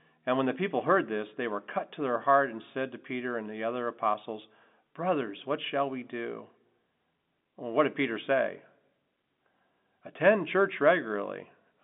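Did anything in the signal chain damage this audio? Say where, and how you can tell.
No, nothing in the chain damaged it; the speech sits in the ordinary G.711 telephone band of roughly 200 Hz to 3.6 kHz, which is the expected sound of a 64 kbps mu-law line rather than a fault.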